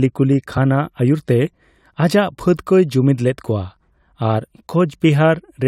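Compressed frames skipped at 0.56 s in this speech clip: a couple of whole frames never reach the output, so the audio jumps ahead by roughly 40 ms, consistent with a 21.3 ms frame.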